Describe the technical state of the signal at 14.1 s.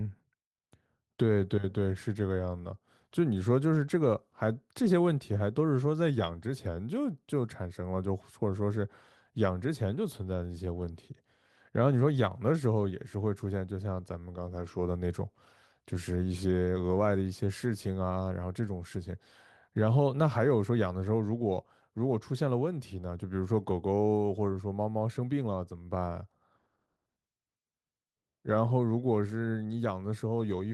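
At 14.1 s the speech signal is intact, with no dropout, distortion or other fault at that moment.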